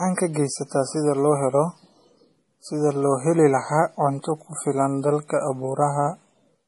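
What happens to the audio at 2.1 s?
At 2.1 s, as throughout, the speech has nothing above 11.4 kHz and a smeared, swirly coding texture, likely low-bitrate MP3 re-saved at a high bitrate: the earlier losses persist despite the large file.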